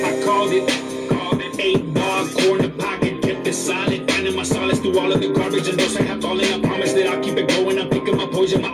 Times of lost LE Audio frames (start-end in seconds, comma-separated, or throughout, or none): none